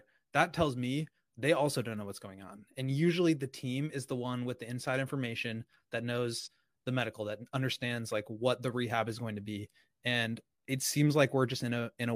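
At 6.39 to 6.48 s, AAC frame loss with concealment patches a 43 ms gap, fitting one lost frame, as smeared noise: blurred spectrogram energy.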